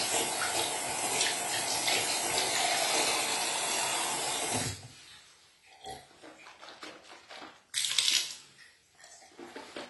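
Throughout this recording of sounds, the top end stops abruptly at about 11.5 kHz, leaving the material dull, and compression damage is plainly audible across the whole clip. This points to AAC compression, likely AAC-LC at a low bitrate, which fits roughly 32 kbps. At that rate the encoder lowers its cut-off and spends too few bits on the remaining bands, so detail is discarded rather than carried through.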